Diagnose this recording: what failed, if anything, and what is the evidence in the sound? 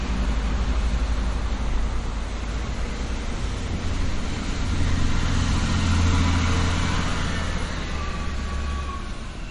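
The codec stage is the likely culprit: MP3 compression. Throughout, nothing sounds above about 10.5 kHz, and weak detail flickers with a watery swirl and smeared attacks, which points to a bitrate near 37 kbps. A plain low-pass filter would dull the treble without that frame-to-frame churning.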